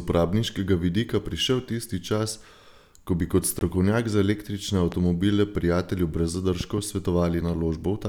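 Speech, with one short gap and three pops. From 3.59 to 3.61 s, just after "ko bi kot" and before "za električne", the audio most likely stopped reaching the headphones in time, and one late packet was thrown away. The result is a Bluetooth dropout: about 20 ms of silence, a length that fits a single lost packet. The speech then resumes further along, as though it had kept playing through the hole. Next, a sudden voltage step, likely from a connector, switch, static discharge or driver glitch, lands on the signal. From 4.92 to 4.95 s, after "za električne", it is heard as one loud pop, a sharp transient roughly 10 dB above the speech, which carries on underneath it. A second such disturbance between 6.61 and 6.80 s, after "prijatelju brez", gives two pops in quick succession at a similar level.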